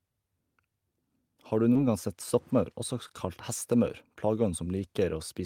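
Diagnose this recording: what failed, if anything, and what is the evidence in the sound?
The network dropped packets here, and the receiver's concealment patched the gaps. You get two short concealed packet losses, one from 1.73 to 1.77 s and another from 3.07 to 3.11 s. Each shows up as a quick smear or wobble in the speech. In both, about 20 ms of audio never arrived in time. The decoder invented 20 ms by extending the preceding sound, then cross-faded back into the real signal.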